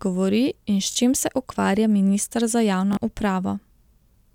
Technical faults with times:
0.91-0.96 Bluetooth stutter
2.93-2.97 Bluetooth stutter

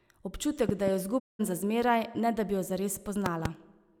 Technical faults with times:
0.69-0.90 loud pop
1.18-1.41 digital broadcast dropout
3.26-3.48 loud pop

